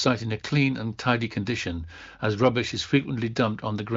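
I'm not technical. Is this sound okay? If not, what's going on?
Yes, no faults here: it's speech carried by an AMR wideband (HD Voice) phone codec, so the sound stops at about 7.6 kHz, which is normal for that kind of call.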